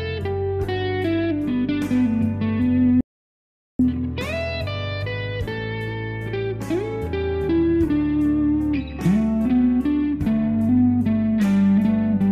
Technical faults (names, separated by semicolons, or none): audio dropout to silence